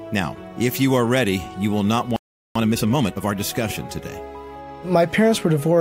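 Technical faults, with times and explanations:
2.16–2.56 s, playback stall: the sound stops dead in mid-flow for about 0.39 s, then resumes. The likely cause is that the player ran short of buffered data or had its output thread held up, so it fed silence until it could continue. Unlike a brief dropout or a packet gap, the break lasts long enough to feel like a pause rather than a click or chop, and nothing is smeared across it.
2.56–3.34 s, time-compressed catch-up: straight after the gap, the audio plays about 1.5 times faster for roughly 0.8 s while keeping its normal pitch. The player is working off its backlog by cutting out small slices and cross-fading the joins. A plain speed-up or a resampling error would raise the pitch along with the tempo. Here only the pace changes.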